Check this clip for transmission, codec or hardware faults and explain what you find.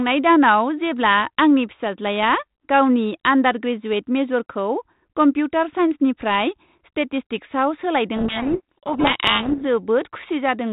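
One transmission fault is audible: a codec payload misread from 8.16 to 9.64 s, in speech carried over G.726 ADPCM at 32 kbit/s, whose light coding damage and 4 kHz band limit are heard throughout. In that span the receiver unpacks each G.726 code word with its bits in the reverse order from the sender, so every sample is rebuilt from the wrong prediction-difference values. The speech sinks under harsh, grinding distortion for about 1.5 s and comes back once both ends agree on the packing again.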